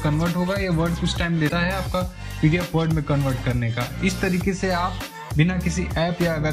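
A break in the MP3 stream has likely left a frame reaching back into the bit reservoir for borrowed data that belongs to another frame. From 1.48 to 1.52 s the audio skips ahead, and that 42 ms stretch, under two 26.1 ms frames, comes out as a brief chirp, burst of noise or short hole.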